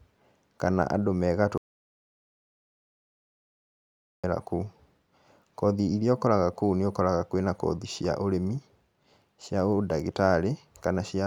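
An audio dropout to silence runs from 1.58 s to 4.24 s, removing about 2.66 s of the speech. The voice is cut off mid-flow, and the gap that follows is silent, with no room tone or hiss underneath, before the speech resumes just as abruptly. The likely cause is the input signal being lost, through a disconnection or a mute, while the recorder kept writing zeros, so whatever was spoken in that stretch is gone.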